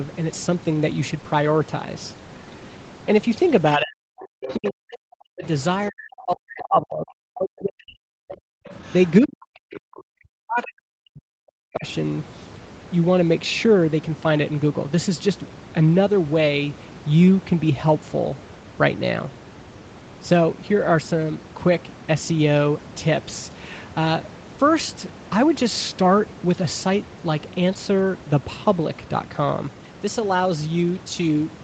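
From 3.77 to 5.44 s, then 5.89 to 8.71 s and 9.21 to 11.86 s, the talker keeps dipping hard, by as much as about 40 dB, and breaking up. That's speech suppressed in double talk, likely the echo canceller ducking everything while both ends talk at once. In and around those stretches you can catch the other side's voice leaking through: a scrap at 4.2 to 4.55 s, about 15 dB under the talker, then fainter bits at 8.29 to 8.36 s, 8.69 to 9.1 s and 9.71 to 10.02 s, from roughly 20 to 25 dB down.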